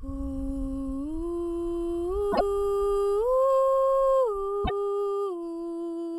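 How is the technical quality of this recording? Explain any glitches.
The music has two stutters caused by repeated frames. At 2.31 s a 26.1 ms block plays three times, adding 52 ms. At 4.64 s it plays twice. Each replay jumps back, heard as a stutter: identical blocks in the waveform.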